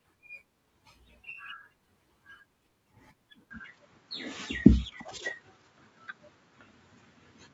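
At 3.51 s the recording likely switches to a poorer input device, with no gap at the changeover. From there to the end the speech loses everything above 7.6 kHz and turns duller, shifts in level by around 5 dB, and carries a faint new noise floor.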